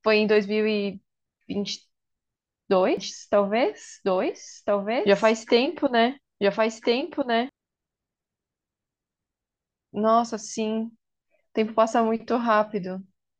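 From 2.97 to 7.49 s a doubled audio track runs: a full-band copy about one and a half seconds late, a few dB quieter, likely from a second, slower capture path. The spectrogram shows repeated patterns, and the copy starts and stops abruptly.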